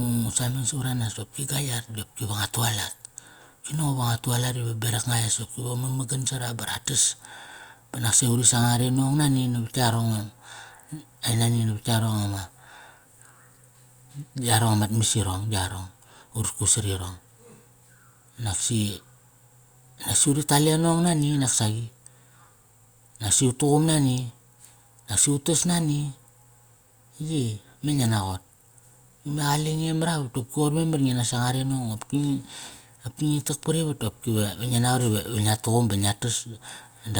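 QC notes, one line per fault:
Nothing to flag here: I listened to the whole speech recording and didn't hear a single problem worth a QC line.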